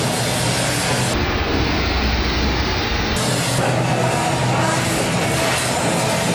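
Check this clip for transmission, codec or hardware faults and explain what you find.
There's one fault. From 1.14 s to 3.16 s the clip hits a stereo-read-as-mono problem: left and right samples that should have been split into two channels were read back to back as a single stream. That doubles the length of each stretch of signal, so the sound plays at half speed and drops a full octave, 12 semitones down. A fainter mirrored copy of the sound also shows up in the top half of the spectrum.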